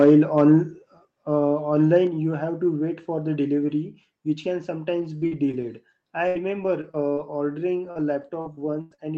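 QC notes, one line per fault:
0.37–0.53 s, microphone overload: The loudest syllables pick up a harsh, crackly edge for that stretch, and it sounds like the peaks ran about 3 dB past the converter's limit, with a small slice of the waveform flattened. The likely cause is that the mic input was simply set too hot.
1.05 s and 2.07 s, microphone volume stepped down: Everything, voice and room alike, drops abruptly, by about 4 dB the first time and about 3 dB the second. That fits the call software likely reacting to the earlier overload by turning the device input down in single steps.
4.99–5.64 s and 6.28–9.05 s, repeated packet loss (robotic sound): Right after "which can", the audio turns choppy. Short holes of up to about 40 ms in the first run and nearly 100 ms in the second are covered by stretching the preceding sound, so it skips instead of going silent.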